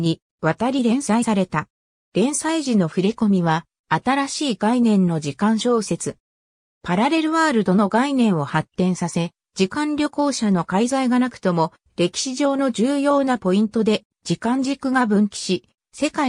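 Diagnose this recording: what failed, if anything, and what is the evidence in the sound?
Compressed frames skipped at the codec stage: at 1.22 s the audio jumps forward by about 70 ms, consistent with a few frames of about 21.3 ms each going undecoded. The audio skips ahead rather than pausing, unlike a buffer underrun's silent gap.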